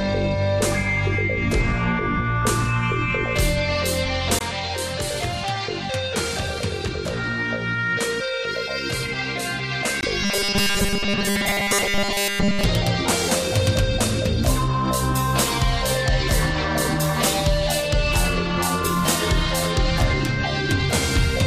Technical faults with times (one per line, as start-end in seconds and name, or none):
4.39-10.03 input switched to a poorer device
10.23-12.65 robotic sound from repeated short buffers